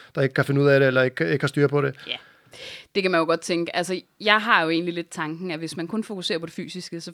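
Nothing goes wrong anywhere in this speech recording; there's simply no technical fault to point to.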